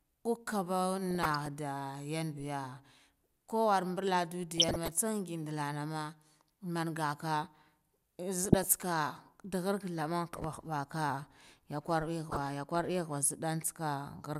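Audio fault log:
1.11–1.48 s, 4.52–4.92 s, 8.38–8.74 s and 12.25–12.39 s, DAB burbling: weak reception lets a fraction of a percent of bit errors slip past error correction into the MP2 data, so corrupted samples put short noise blips in individual sub-bands and corrupted scale factors make sub-bands jump in level for up to a frame, giving burbling over the speech.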